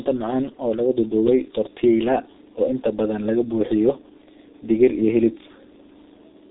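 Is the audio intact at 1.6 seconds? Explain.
No, at 1.6 s the speech has G.723.1 codec damage, as it does across the whole clip. The sound is cut off above 3.8 kHz, muffled and hoarse with smeared consonants, which points to a heavily compressed, roughly 6 kbit/s stream whose slow-updating voice model trails behind the speech.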